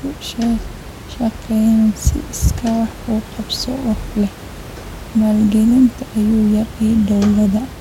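The clip is speech, and nothing is technically wrong with it.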